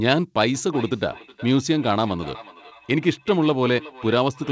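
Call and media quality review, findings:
Feedback echo between two devices, 0.54 s to end: speech returns about every 0.4 s at about -19 dB, a discrete delayed copy rather than a diffuse room tail; second device's playback re-captured.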